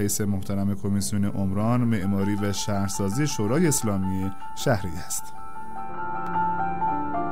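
At 3.78 s and again at 6.27 s the sound skips forward, with roughly a hundredth of a second dropped each time and the two sides butted together with no gap. The spacing of about 2.5 s points to audio missing between chunks, likely from a recorder or processor losing a sliver while closing one block and opening the next. On a waveform each join shows as a sudden jump where the cycles fail to line up; a spectrogram shows a thin vertical seam.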